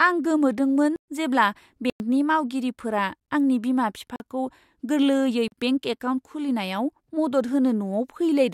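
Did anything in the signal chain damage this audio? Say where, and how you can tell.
Yes. The speech cuts hard to dead silence and back at 0.96–1.08 s, 1.90–2.00 s, 3.26 s, 4.16–4.20 s and 5.48–5.52 s. These are blocks of digital silence lasting 17 to 120 ms. The driver or buffer stage missed its deadlines and output zeros instead of audio.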